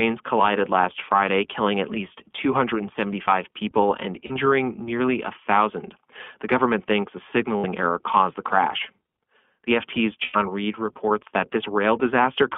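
Throughout, the iLBC codec confines the speech to a 200 to 3400 Hz line band with a plainly rough, synthetic edge. Its standalone frames, consistent with the 15.2 kbps 20 ms mode, keep damage from spreading. Lost iLBC frames at 4.26 to 4.32 s (40 ms), 7.59 to 7.65 s (60 ms) and 10.24 to 10.37 s (100 ms) become held, buzzy vowels rather than silence. The longest fades, and the speech recovers instantly afterward.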